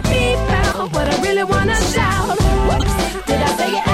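At 0.72 to 0.75 s and again at 2.78 to 2.83 s there's a corrupt frame decoded: damaged bits got played anyway, so energy lands at wrong frequencies for a couple of frames. Each comes across as a fairly loud chirpy blip.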